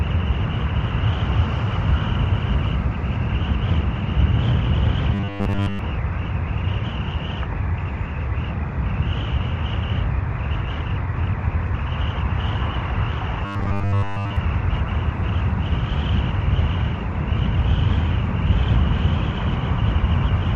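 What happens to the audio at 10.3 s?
Nothing goes wrong at 10.3 s: the audio there plays through intact, with no dropout, click, distortion or other fault.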